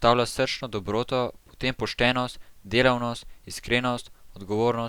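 Speech recording with nothing technically wrong to report.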